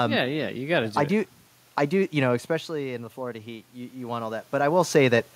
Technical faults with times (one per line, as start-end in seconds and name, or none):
2.48-4.54 automatic gain rising